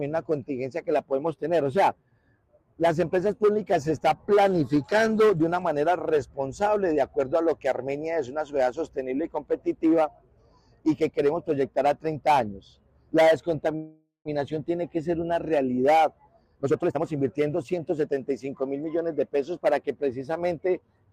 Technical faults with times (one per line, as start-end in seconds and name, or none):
13.75-14.28 call audio freeze
16.46-18.09 jitter buffer speed-up